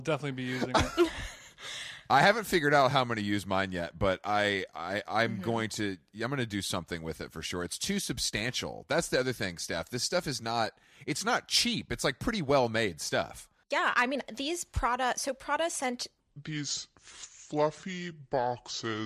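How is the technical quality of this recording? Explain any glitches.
The recording has one clear glitch, a section at the wrong speed near the end. From 16.20 s to 19.06 s the speech suddenly turns deep and drawn out, dropping by roughly seven semitones and moving at about two-thirds pace (0.668 times normal). Because pitch and tempo fall together at the same moment, this is likely playback or editing against the wrong clock, stretching those final seconds rather than re-pitching them separately.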